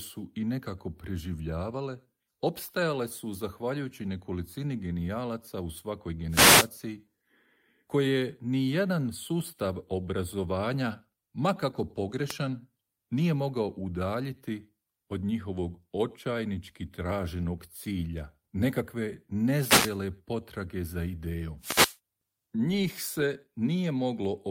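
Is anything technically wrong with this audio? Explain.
Yes. Wireless microphone noise hits occur at 6.29–6.70 s (after "nekolicini genijalaca u svakoj"), 12.26–12.35 s, 19.51–20.02 s (before "potrage za idejom") and 21.59–21.98 s (right after "potrage za idejom"). Each time, the FM radio link fades as reflections cancel and receiver noise swells into a brief swish of static over the speech. Unlike a digital dropout, the sound is buried under hiss rather than cut to silence.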